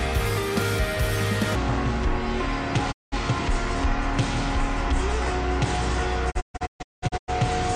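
At 1.55 s the audio drops into a section at the wrong speed that runs to the end of the clip. It plays at about 0.59 times its original rate, so everything turns slower and deeper together, by roughly ten semitones. The likely cause is material fitted to the wrong clock. On a spectrogram, every harmonic and formant band shifts sharply downward and stretches in time. In the waveform, events spread out and the cycles widen.

At 2.91 s a digital broadcast dropout mutes the sound, fading out over about 20 ms, leaving a hole of about 192 ms, and returning at 3.14 s. Whatever was sent in that gap is gone. The waveform flattens to a line and the spectrogram shows a clean vertical blank. From 6.30 to 7.30 s a second dropout breaks the audio into several short holes across nearly a second, about 640 ms missing in total. The longest single gap is about 192 ms, and each edge has the same brief fade.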